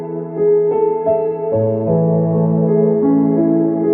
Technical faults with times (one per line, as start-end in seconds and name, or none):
none